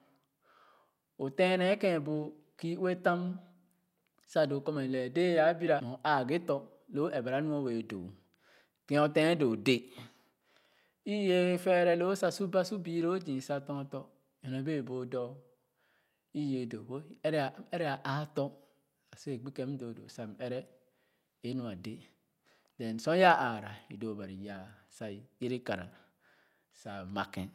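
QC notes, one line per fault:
5.80 s, CD skip: the laser jumped to another turn of the disc's spiral after "a bira", so the player muted for a few milliseconds, leaving a tick and an abrupt jump in the speech.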